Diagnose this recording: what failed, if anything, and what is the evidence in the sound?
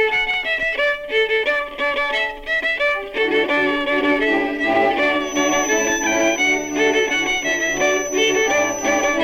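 A feedback whistle enters at 5.17 s and holds to the end: a thin, steady tone near 6 kHz, roughly 10 dB below the main sound, swelling and fading slowly in level. The likely cause is the acoustic path from loudspeaker back into the microphone sitting just at the edge of oscillation. Unlike a runaway howl, it never builds, and unlike mains hum it is high and lacks a harmonic series.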